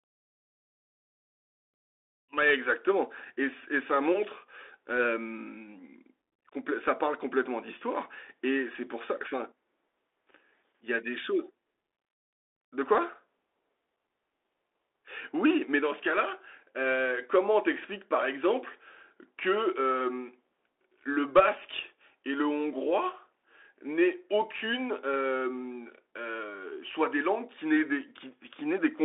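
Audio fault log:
Throughout: Bluetooth CVSD headset codec. Speech is held to 300 Hz to 3.5 kHz, with nothing above 3.8 kHz. Scratchy s sounds and granular hiss set it apart from clean band-limiting.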